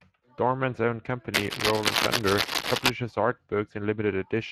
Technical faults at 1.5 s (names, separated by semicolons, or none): Speex codec; cable scratch noise